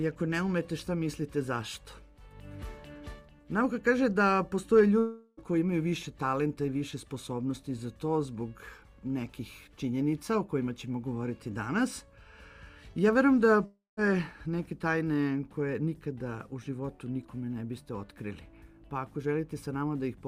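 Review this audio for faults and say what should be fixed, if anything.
Long network dropout at 4.99–5.39 s and 13.65–13.99 s: the last sound smears into a fading buzz for about 0.38 s and 0.32 s. A brief silence follows, near 0.2 s in the second. Audio resumes with that material gone, likely because packets stopped arriving.

A larger jitter buffer, forward error correction or a steadier network link would prevent these gaps.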